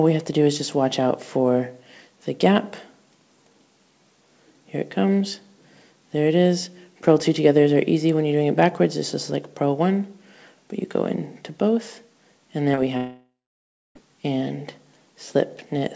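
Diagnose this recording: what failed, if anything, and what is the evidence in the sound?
Short concealed packet loss in the network stage at 12.72 and 12.75 s: two back-to-back 20 ms gaps were filled by extending the preceding sound, leaving a brief smear and a smoothed patch on the spectrogram.

Long network dropout from 12.97 to 13.97 s: a fading synthetic continuation gives way to about 0.65 s of near-silence, a flat waveform and dark band below the G.722 path's 8 kHz ceiling, likely from packets ceasing to arrive.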